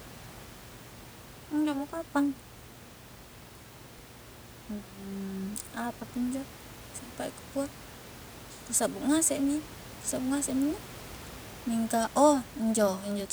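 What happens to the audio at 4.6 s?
Nothing goes wrong at 4.6 s: the speech carries on intact, with only the room noise of the recording space sitting about 18 dB below it.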